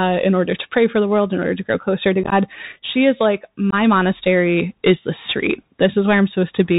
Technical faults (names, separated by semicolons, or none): Bluetooth CVSD headset codec; unconcealed Bluetooth headset packet loss